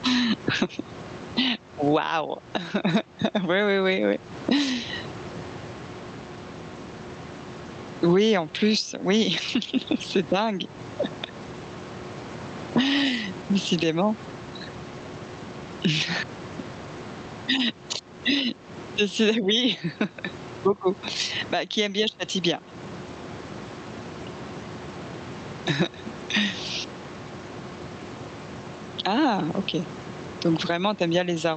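Gain pumping runs through the whole speech clip: the room noise, sitting about 29 dB below the speech, swells up in each pause and ducks under every loud syllable, a swing of roughly 15 dB. This is likely gain set too high with a fast limiter clamping down, squashing the dynamics.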